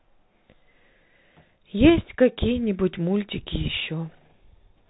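It's a speech clip, and the whole thing carries the sound of a Bluetooth CVSD headset codec. Nothing comes through above about 3.8 kHz, so it's boxed into that narrow phone-call band. The damage is plainly audible: s sounds come out scratchy, louder bright moments smear where the one-bit up/down steps can't keep pace, and a grainy hiss sits underneath the speech. That all fits CVSD running at 64 kbps.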